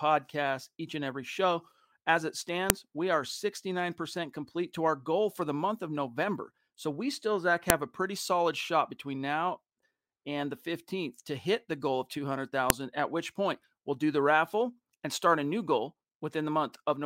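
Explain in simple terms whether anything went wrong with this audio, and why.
Three sharp, loud clicks cut into the speech: at 2.70 s just before "we are", at 7.70 s just before "a pretty solid shot", and at 12.70 s just before "at which point we'll". They come exactly 5 seconds apart. This is a file header played as audio. The recording was joined from 5-second pieces, and each piece's short block of file information was left in and played as sound, producing a snap at every join.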